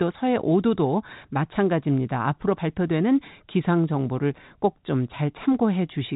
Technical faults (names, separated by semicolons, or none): none